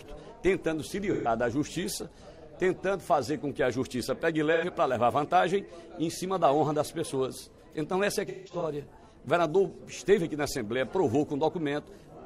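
Around 1.12 to 1.28 s there's a short smeared, phasey patch, then another at 4.53 to 4.64 s. Both are AAC frame loss with concealment: a few frames went missing and the decoder padded the gap by reusing the last good spectrum. The third and worst hits 8.28 to 8.64 s, where about 256 ms of losses are scattered over roughly 340 ms. The longest run is around 150 ms.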